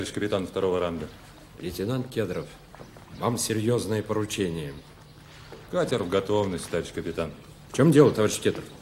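No technical faults can be heard anywhere in the audio. Nothing in the sound points to a break, glitch or error in the path it travelled.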